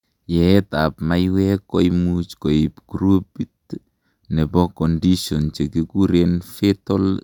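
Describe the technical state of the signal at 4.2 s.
At 4.2 s the speech signal is intact, with no audible fault at that point.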